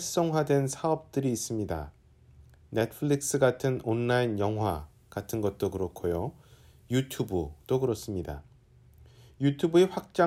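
From about 4.68 s to 7.88 s the sound suddenly turns thin, glassy and hissy at the top, with the sibilant, splashy end of the spectrum jumping forward. That's pre-emphasis left on: the treble was lifted for transmission and the matching de-emphasis never got applied. The tilt fits the FM 50 µs curve, leaving 10 kHz sitting about 11 dB hotter relative to 1 kHz, so the low end feels like it's drained away.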